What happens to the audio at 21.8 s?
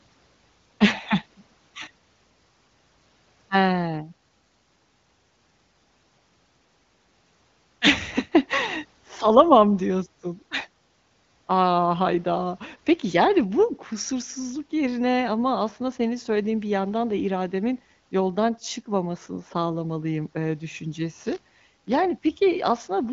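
At 21.8 s the sound is inside a burst of buffer tearing, from 21.16 to 21.97 s, just after "yoldan çıkmamasını sağlamalıyım ııı". The playback writer and reader have slipped. Each period carries a tiny sliver of audio about 20 ms old. Its hard joins make a 100 Hz robotic buzz.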